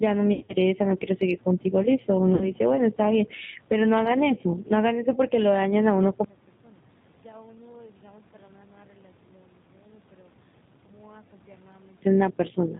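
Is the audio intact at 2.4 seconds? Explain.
No. At 2.4 seconds the audio sits inside a stretch of VoIP packet loss concealed by the speech codec, running from about 2.35 to 2.48 s. About 60 ms of sound is missing, which fits three lost packets. The decoder filled the gap by repeating its last pitch and filter settings while lowering the level frame by frame. The result is a fading buzzy tone or coloured noise rather than clean speech. The voice stays weak and distorted briefly after the real data resumes, because each frame is rebuilt from the one before.

The same moment also carries the G.729 codec damage heard across the whole clip. This 8 kbit/s codec rebuilds speech from a vocal tract filter, a pitch predictor and a few pulses per frame. Nothing above 4 kHz gets through, so the sound is dull and band-limited. The speech has a rough, slightly synthetic edge, and the damage is plainly audible.

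Gain pumping is present here too. The level is pulled down on each loud sound and rises again in the gaps, a swing of about 10 dB. The quiet room background sits about 43 dB below the speech. The cause is likely input gain set far too high, with a fast limiter or compressor clamping every peak and squashing loud and soft parts together.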